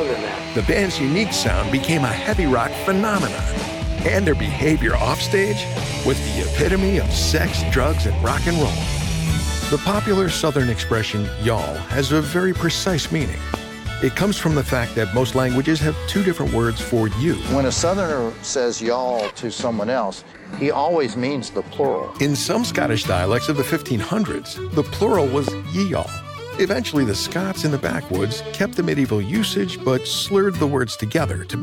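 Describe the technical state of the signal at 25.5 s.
At 25.48 to 25.50 s there is a single loud pop, likely a voltage pulse from a plug, switch or static entering the chain. It sits roughly 15 dB above the surrounding sound as a sharp spike on the waveform and a thin broadband vertical stripe on a spectrogram.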